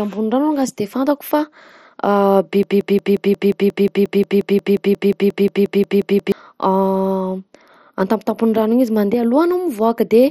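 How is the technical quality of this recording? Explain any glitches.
The recording is clearly degraded: the speech is dull and gritty throughout, and one stretch sticks on a tiny fragment for several seconds.

Across the whole clip, the sound points to MP2 compression, probably at a low bitrate around 56 kbps. Coarsely quantised sub-bands give the speech a heavy gurgling, granular edge, and nothing is present above 14.6 kHz. On a spectrogram this shows as a hard ceiling at that frequency, with upper bands flickering in and out as blocky patches rather than smooth energy.

From 2.63 s to 6.32 s there is a broken-record loop. A 178 ms fragment repeats exactly, back to back, 21 times, producing a rapid stutter at about 5.6 repeats per second. The likely cause is a stalled player or stream resending its last buffered piece, so the speech that should fill those seconds is lost. The waveform shows an identical short shape tiled end to end, and the spectrogram shows a repeating vertical stripe pattern.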